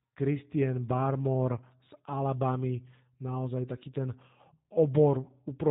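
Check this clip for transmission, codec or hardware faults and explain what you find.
One fault runs through the whole clip: G.729 codec damage. The speech sounds plainly rough and synthetic, with nothing above about 3.8 kHz. The codec rebuilds each short frame from a vocal tract filter, a pitch predictor and a few pulses, which fits an 8 kbit/s G.729A link.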